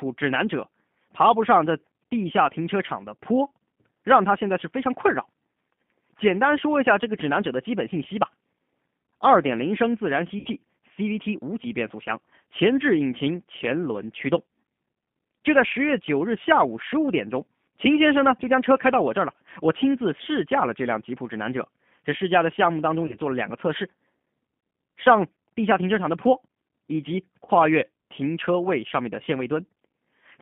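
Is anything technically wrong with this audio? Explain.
Yes. G.729 codec throughout: the speech passes through an 8 kbit/s coder that rebuilds each 10 ms frame from a vocal-tract filter, a pitch predictor and a few pulses, confining it to roughly 150 Hz to 3.5 kHz. The result is plainly rough, slightly synthetic and muffled.

VoIP packet loss concealed by the speech codec at 10.39 to 10.48 s, 23.06 to 23.17 s and 27.45 to 27.50 s: the decoder bridged missing audio, about 60 ms at the first point, which fits two lost packets, and 30 ms at each later one, by stretching its last pitch and filter with fading gain. Each gap becomes a brief buzzy, dulled smear that stays weak slightly after audio resumes.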